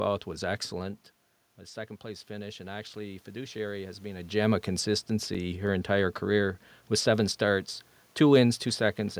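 Just after "was excellent", around 1.57 s, there's some automatic gain rising. The talker's level drops by about 11 dB when they seem to move back from the mic around the 1 s mark, and the gain control responds by slowly pushing its gain up by about 5 dB until roughly 4.34 s. You can hear the voice and the room noise swelling together over those few seconds, and there's still a net dip.

Between 5.02 and 5.99 s, right before "career with seven starts", there's a burst of CD scratch ticks: seven small clicks, with the longest only a few milliseconds. A blemish on the disc wiped out more data than the error correction could rebuild on each turn, so the player patched or muted those samples. It comes across as a quick, regular ticking of uneven strength.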